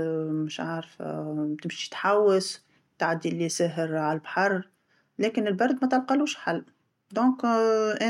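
Nothing in this speech recording points to a technical fault. There are no events to place in time.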